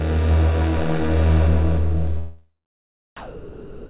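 At 3.17 s the sound gives way to steady comfort noise that runs to the end, about 260 ms of it lost. This is most likely sound dropped by the voice detector, which misread it as background. Unlike packet-loss concealment, nothing is smeared or repeated. The band stops at 4 kHz throughout, consistent with the G.711 call path.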